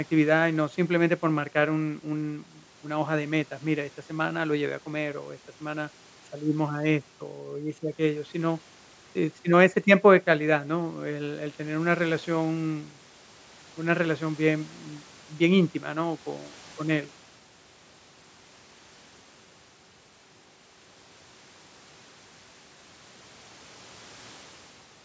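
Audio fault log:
Nothing wrong turns up in this speech, which has simply been through a call's usual microphone processing, so the lowest bass is trimmed away and there's nothing above 8 kHz, just as expected.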